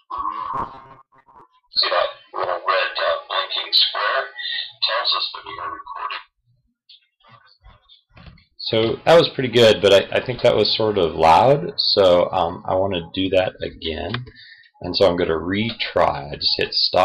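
From 0.54 to 1.41 s the sound turns into a rigid, metallic buzz fixed at 134 Hz, the robotic sound from repeated short buffers. It likely comes from audio arriving too seldom, with roughly half the time filled by looping the last 7.5 ms. Unlike comb-filter colouring, the buzz sits at a fixed rate set by the loop length.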